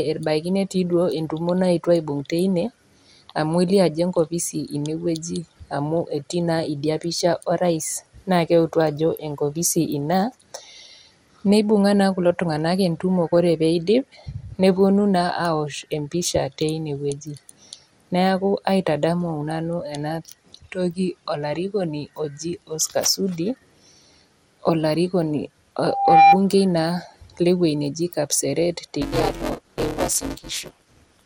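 Throughout the speech the top end is dull and the sound carries a gurgling, granular roughness, likely MP2 compression at a low rate around 80 kbps. Upper sub-bands are starved of bits and drop in and out. A spectrogram shows nothing above 17.3 kHz and patchy, flickering blocks in the high bands.

From 25.81 to 26.40 s a loudspeaker feedback squeal appears. The microphone re-amplifies its own loudspeaker until a 796 Hz tone runs away, swelling over a little under half a second to about 10 dB above the speech. On a spectrogram it is a single bright horizontal line that thickens as it grows.

From 29.01 s to the end, buffer tearing adds a robotic 188 Hz buzz, which fits a 256-sample buffer. Writer and reader have slipped, so roughly seven tenths of each buffer replays audio about 10 ms old. The waveform shows hard discontinuities repeating at that period, and the spectrogram shows regular vertical striations.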